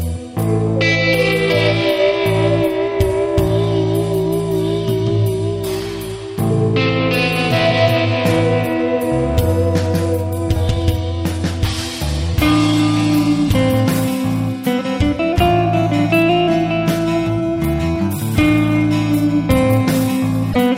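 At 20.51 to 20.56 s the audio jumps ahead with a brief glitch, likely a broken MP3 bit reservoir after dropped frames, consistent with 24 ms frames.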